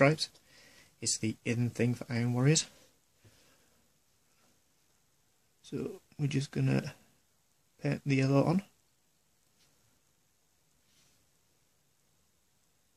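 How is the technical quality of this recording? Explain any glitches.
The recording's signal is technically sound, with no glitches or faults anywhere in the audio.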